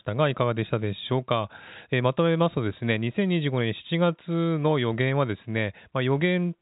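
The speech has the narrow, band-limited sound of G.711 telephone coding, with nothing above about 3.8 kHz, and no technical fault can be heard in it.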